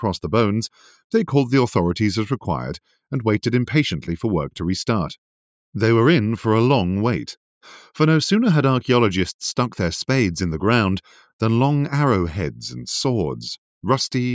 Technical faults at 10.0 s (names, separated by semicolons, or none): none